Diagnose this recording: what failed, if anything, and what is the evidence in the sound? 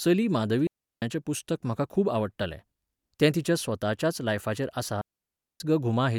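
The speech cuts out twice with a digital wireless dropout, a failure on the radio link between transmitter and receiver. From 0.67 to 1.02 s, right before "पुस्तक म्हाका खूब आवडटालें", there's a clean 0.35 s hole, and another from 5.01 to 5.60 s, about 0.59 s long. Both are near silence with no hiss or crackle either side. When the link lost too much data, the receiver muted with a very fast fade rather than passing garbage, so you get tidy holes instead of noise bursts.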